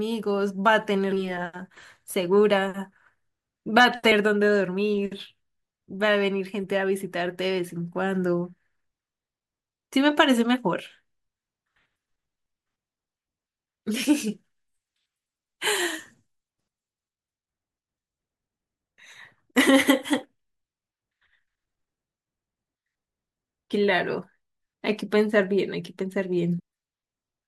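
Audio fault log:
1.11, 14.04–14.06, 19.60–19.62 and 26.58–26.60 s: damaged data in a compressed stream. Each time, a short stretch of the encoded speech arrived corrupted, so the decoder could not read those frames, lost its place and had to search ahead for the next valid frame header before decoding resumed. The result is a brief chirp or blip of about 15 to 20 ms.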